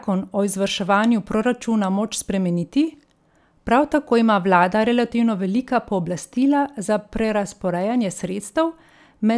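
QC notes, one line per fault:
No fault found, so there is no line per fault for these QC notes.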